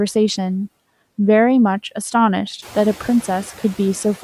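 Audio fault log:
Throughout, noise suppressor artifacts: the suppressor pulls down the bands it reads as steady noise by about 16 dB, frame by frame, so the residue sinks between phrases and pumps back under the speech. The room noise gets about 16 dB louder from roughly two and a half seconds in but stays about 19 dB under the speech.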